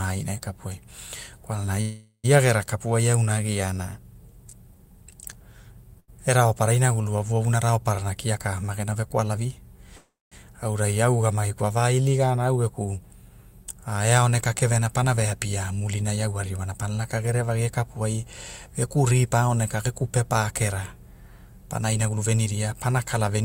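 Speech with three kinds of network fault. Two call audio freezes, at 1.81 to 2.26 s and 9.96 to 10.34 s, stretch the last sound into a fading buzz or hiss that ends in silence for about 110 ms and 240 ms. Speech then resumes exactly where it stopped, with nothing lost, which points to packets that were likely delayed rather than dropped. A burst of packet loss at 6.00 to 6.10 s is different: a brief fading fill, then speech jumps ahead with about 80 ms gone. Jitter buffer speed-ups at 8.39 to 9.59 s, 13.97 to 16.79 s, 17.61 to 18.25 s, 18.66 to 19.49 s and 21.82 to 23.41 s make speech sound hurried, 7 to 13 percent faster at unchanged pitch. There are no gaps in these stretches, only a rushed pace.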